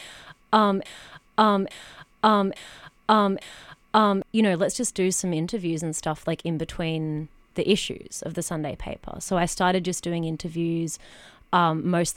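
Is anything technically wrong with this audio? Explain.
Yes. From 0.85 to 4.22 s, a broken-record loop repeats a single 0.85 s fragment four times, back to back and identical on each pass. A stalled player or stream likely kept resending its last buffered chunk, so the audio that belonged in that span is lost.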